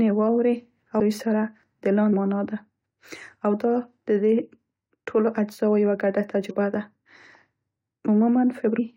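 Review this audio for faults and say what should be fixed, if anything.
Compressed frames are being skipped: whole blocks of coded audio go missing or get rejected as damaged, so playback jumps forward by some multiple of the roughly 21.3 ms frame. Gaps at 0.99 s (after "واورې او"), 2.12 s (before "معنا ده"), 6.49 s (after "ټولو اجزاوو یوه ګډه") and 8.78 s, each dropping something like a third of a second, except about a tenth at 6.49 s. Re-encode from the source and verify the file's integrity after transfer.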